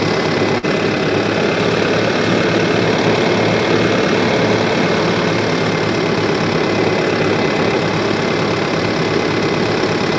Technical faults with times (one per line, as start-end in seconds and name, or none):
0.58-0.65 short stall from a late packet